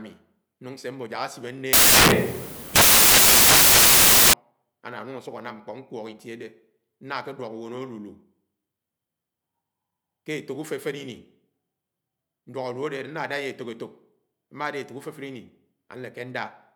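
Speech clip. From 1.73 to 4.33 s the samples are built from the wrong bytes, so the sound turns into loud, harsh broadband noise. Noisy low bits end up as the big part of each value.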